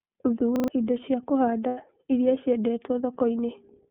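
Throughout the speech, the iLBC codec limits the band to roughly 150 Hz to 3.4 kHz, so the top end is absent and sibilants are dull. Each 30 ms frame is coded independently at a low rate, which fits iLBC's 13.33 kbps mode, and the damage is plainly audible as a rough, slightly synthetic texture on every syllable.

From 0.56 to 0.68 s, just before "indo cia", a repeated buffer produces a stutter. A 40 ms piece of audio plays three extra times, with a hard join at each repeat, because fresh audio didn't reach the output in time and the device replayed the last buffer. About a tenth of a second of the original sound never plays.

Between 1.68 and 1.78 s, after "indo cia" and before "iria ciendetwo", lost iLBC frames leave a 90 ms gap, consistent with three consecutive 30 ms frames. The decoder fills it by repeating the last pitch cycle blended with noise, which is heard as a brief held, buzzy vowel. 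Since iLBC frames don't depend on their predecessors, the voice is right again almost at once after the gap.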